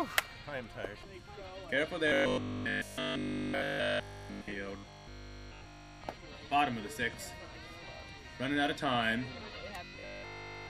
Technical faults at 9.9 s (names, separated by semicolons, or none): robotic sound from repeated short buffers